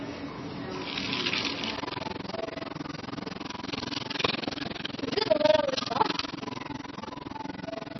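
From the start the sound is dull and watery, with a swirling, unstable texture. This is heavy damage, likely from MP3 compression at a starved bitrate, around 23 kbps, where weak frequency lines flicker on and off between frames.

From 1.77 s to the end, a rough, robotic flutter chops the sound around twenty times a second, with the level dipping by about 60 dB in each cycle. This is overlap-add ripple: the sound was rebuilt from windowed frames whose overlaps don't sum to a steady gain, so loudness pulses at the frame rate.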